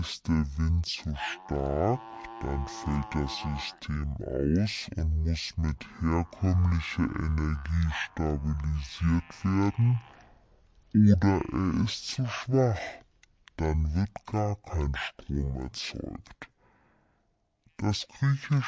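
Speech recorded at one sample rate is being played back at half that rate with no conversion, a wrong sample rate fault that fits 32 kHz audio read out at 16 kHz. Throughout the clip, everything runs at half speed and a full octave (12 semitones) lower.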